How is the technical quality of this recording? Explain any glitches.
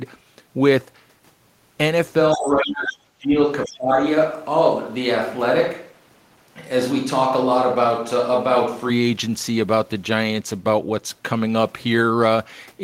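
The recording has clear technical problems in its first nine seconds.

Switch to a distant microphone, 2.22 to 8.88 s. The close microphone's signal seems to drop out and a farther one takes over, likely a camera or room mic. The speech suddenly turns roomy and hollow with thinner bass, though the level stays about the same. Room noise rises to roughly 35 dB below the speech. At 8.88 s the sound snaps back to the close, dry character.

Other side's voice leaking through, at 2.33 to 2.54 s, 2.87 to 2.97 s and 3.65 to 3.73 s. The far party is played over a loudspeaker, and the echo canceller likely failed to remove it from the microphone. Brief scraps of a second voice come through, about 20 dB below the main speech in the first and last bursts. The middle burst is louder, at about 10 dB down.

Speech suppressed in double talk, 2.36 to 3.37 s and 3.66 to 3.91 s. While both sides talk at once, the echo canceller likely cannot separate the local talker from the loudspeaker echo, so it turns everything down. 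In the first stretch, lasting about a second, the talker's speech dips, falling by as much as roughly 35 dB. The second, shorter dip reaches roughly 20 dB.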